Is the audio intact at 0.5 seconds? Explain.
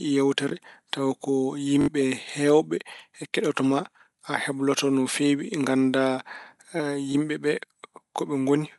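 No. From 0.49 to 0.51 s, just before "tawa ko", a repeated buffer occurs. A block of about 21 ms, which fits a 1024-sample buffer, plays twice, causing a brief stutter or click.

The speech also has a grainy, breathy edge and nothing above 11.5 kHz. This is likely Bluetooth LC3 compression, around 48 kbps.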